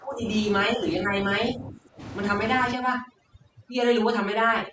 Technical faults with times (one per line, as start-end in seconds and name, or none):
0.00-0.26 speech suppressed in double talk
0.76-0.85 speech suppressed in double talk
1.54-2.00 speech suppressed in double talk
2.73-4.72 overdone noise removal